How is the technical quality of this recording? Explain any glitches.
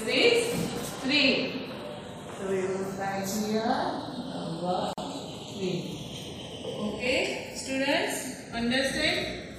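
The recording has two faults: a slow drift between the channels across the whole clip, and one brief silent gap.

Channels drifting apart: the two channels run on clocks differing by roughly fifty parts per million, so their offset grows to about half a millisecond. In mono this gives a slow, one-way flanging sweep, not a repeating cyclic effect.

Gap at a join of encoded pieces: from 4.93 to 4.98 s, a 45 ms gap opens where separately encoded pieces meet. Unlike a dropout, the sound resumes exactly where it stopped, with nothing skipped.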